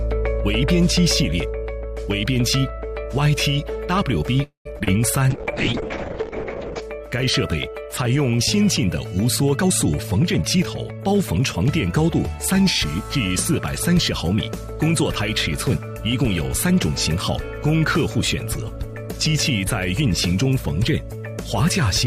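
At 4.43 s the sound stops moving forward. The last moment carries on as a fading buzz, then about 120 ms of silence, for roughly 0.22 s in all. At 4.67 s the audio resumes exactly where it left off. Nothing is lost. A gap has simply been inserted. This is a call audio freeze. Packets were likely held up in transit, so the jitter buffer ran dry and the receiver stretched the last sound to cover the wait.

Two brief disturbances follow straight after, at 4.79 to 4.82 s and 4.84 to 4.89 s. Each is short concealed packet loss. Small pieces of the call, about 40 ms and then 20 ms, never reached the decoder in time. The receiver patched each hole by extending the preceding sound and blending back into the real signal. They come across as a quick smear and a wobble, close together.

From 5.31 s to 6.88 s the sound turns rough and dull. This is a call bitrate drop. The encoder was told to spend far fewer bits, which fits a fall from around 48 kbps to around 6 kbps. 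The upper range is cut off at about 8 kHz instead of 20 kHz. The lowest rate holds for about 1.5 s. Texture becomes coarse and watery, and brightness disappears until the rate recovers.

Between 9.56 s and 11.55 s the audio runs fast. The pitch stays the same. This is a jitter buffer speed-up. The buffer had built up more delay than it wanted. To drain it, the receiver cut out many small pitch-period slices in a row, removing about a fifth of a second overall. Playback runs at about 111 percent of normal speed. It sounds hurried for those two seconds.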